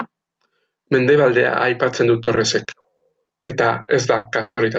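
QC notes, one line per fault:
2.23–4.61 s, repeated packet loss (robotic sound): right after "aipatzen du", nine dropouts hit the speech, the longest 160 ms. Each hole is bridged by stretching the previous sound, so about a fifth of this stretch turns choppy, with pieces missing.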